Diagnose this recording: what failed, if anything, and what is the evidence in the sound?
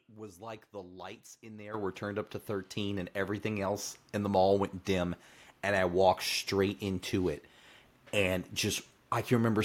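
The microphone volume stepped up twice in call processing: the speech and background noise jump together by about 10 dB at 1.74 s, then about 4 dB more at 2.76 s. Gain control raised the input level in discrete steps. The waveform envelope shows abrupt step increases, and the spectrogram brightens uniformly across all frequencies at each step.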